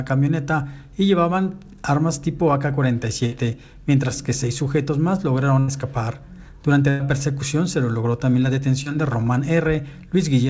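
A burst of packet loss hits at 3.26–3.34 s, 5.60–5.70 s and 6.90–7.01 s. The receiver extends the last sound for about 56, 80 and 98 ms, fading it into a held buzz or hiss, then skips ahead. On a spectrogram these look like smeared, decaying bands ending in an abrupt jump.

A short concealed packet loss at 8.83–8.88 s fills about 22 ms with a continuation of the preceding sound. It is heard as a brief smear or wobble and shows as a small blurred patch in the waveform. Throughout, the spectrogram is empty above 8 kHz, consistent with a wideband call codec.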